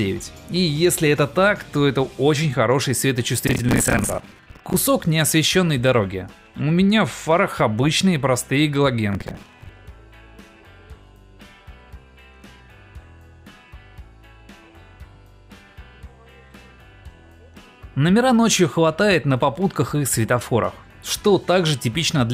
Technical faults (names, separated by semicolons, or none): processor overload crackle